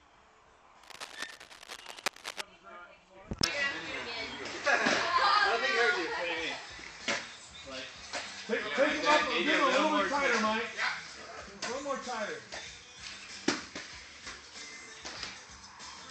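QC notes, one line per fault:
0.83 to 2.41 s, cable scratch noise: a dense, uneven scratching and rustling rides over the sound for about 1.6 s, sitting only about 10 dB below it, so it is clearly audible rather than buried. The crackle is irregular, not a steady hiss or hum, and that points to a likely cause in a worn cable, connector or control being moved, its contact resistance jumping around rapidly and injecting bursts of noise into the signal path.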